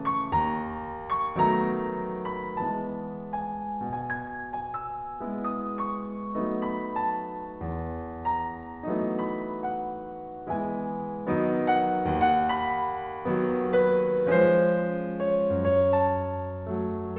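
No technical faults are audible.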